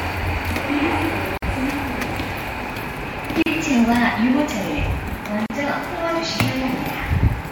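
At 1.38 s the sound cuts out for about 49 ms, then again at 3.42 s and 5.46 s for about 38 ms each, a gap at a join of encoded pieces repeating every 2 s. The pieces were encoded separately and spliced untrimmed, so encoder start-up delay and final-frame padding survive as silence. Each dropout has smeared edges, and the sound resumes exactly where it stopped.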